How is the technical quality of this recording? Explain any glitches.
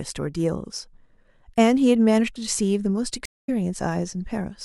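There's one real glitch, a stream reconnect from about 3.25 to 3.49 s. The speech drops out for 171 ms, then picks up again roughly 150 ms further along, so a small slice of speech goes missing. That's the connection breaking and the player reconnecting, then spinning up a fresh decoder partway into the live stream. The restarted decoder's first frame or two come out muted or faded in, so the speech returns softly rather than with a clean edge.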